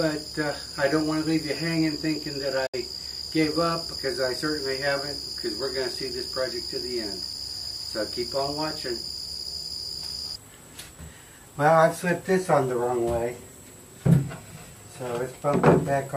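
At 2.66 s the sound fades out within 8 ms and is silent until 2.74 s. This digital broadcast dropout lost about 64 ms, which fits two missing frames.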